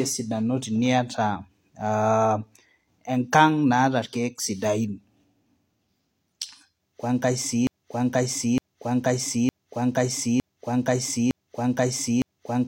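At 7.67 s the speech locks into a broken-record loop: a fragment of about 0.91 s plays back exactly, back to back, six times, and the repetition runs to the end of the clip. The most likely cause is a stall in the player, encoder or stream, which kept resending the last fragment it still held. Whatever should have been heard across those final seconds is missing, replaced by the identical repeating piece.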